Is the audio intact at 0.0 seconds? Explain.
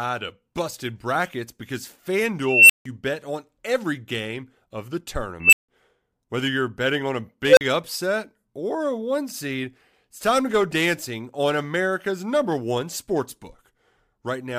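Yes, the audio is intact at 0.0 seconds, with no audible fault at that moment.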